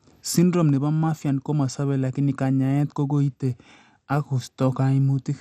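Speech, likely squeezed through MP2 compression at a low rate fitting 64 kbps, leaves nothing above 14.7 kHz and plainly audible dull, gurgling, granular distortion throughout.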